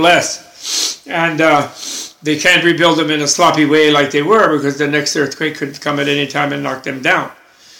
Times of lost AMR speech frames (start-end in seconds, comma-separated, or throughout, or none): none